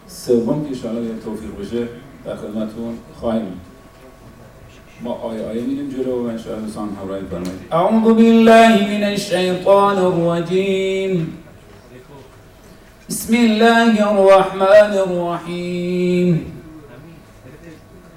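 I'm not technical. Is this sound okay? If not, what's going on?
No. At three points the sound got louder than some stage in the recording chain could handle, so the tops of the loudest moments were sliced off flat. This is called hard clipping. Those flattened peaks add a crackle or harsh fuzz you can hear from 8.08 to 8.76 seconds, very briefly again from 9.70 to 9.84 seconds, and longest from 13.34 to 14.81 seconds. The middle one is milder.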